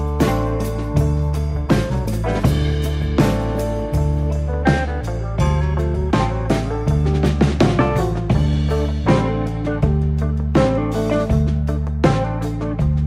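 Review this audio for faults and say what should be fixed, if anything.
Nothing needs fixing, as the signal holds steady throughout with no technical faults to be heard.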